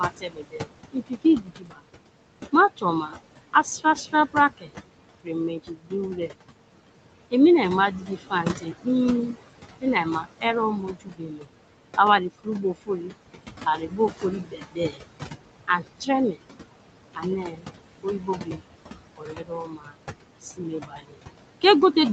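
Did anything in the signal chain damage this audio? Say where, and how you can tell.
Yes, the damage comes from call processing, specifically the noise suppressor. Throughout the clip, the room noise, which sits only about 9 dB below the speech, is pulled down by about 21 dB between phrases and swells back under them. That band-by-band, frame-by-frame fluctuation separates it from a simple gate, which would drop everything evenly.

Speech cut by the noise suppressor occurs at 0.09–1.84, 2.52–6.34, 8.01–13.13, 13.76–15.01, 15.68–16.4, 17.15–18.63 and 19.17 s to the end. Soft consonants and endings sink by up to about 22 dB and sound swallowed. Unlike packet loss, nothing drops out abruptly or clicks. The quiet parts fade smoothly with the background.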